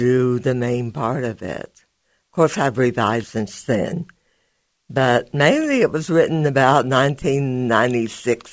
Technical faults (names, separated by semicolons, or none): skip ahead; jitter buffer speed-up